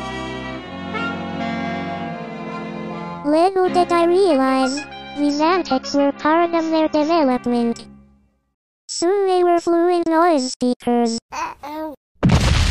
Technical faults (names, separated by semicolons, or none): adaptive stream at a lower bitrate